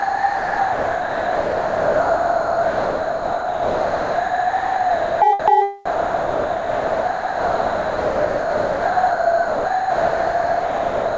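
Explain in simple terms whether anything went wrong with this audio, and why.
Sound dropped by the voice detector, from 0 to 5.22 s, from 5.40 to 5.48 s, and from 5.86 s to the end: the sound is replaced by steady filler noise. Most likely the sender's detector mistook the sound for background and stopped sending, so the receiver filled the gaps, and only the short stretches between them come through. Nothing above 8 kHz is heard because of the call's codec.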